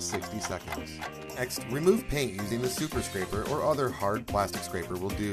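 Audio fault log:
0.51, 1.49, 2.51, 3.49 and 4.49 s, overlap between stream segments: a brief click or skip recurs about once per second, matching 1.0 s segment boundaries. At each join the timestamps of neighbouring segments overlap, so the player discards the apparently doubled portion even though that sound occurred only once. Between 5 and 19 ms of real audio is removed each time, and the waveform jumps abruptly across the gap, which produces the tick.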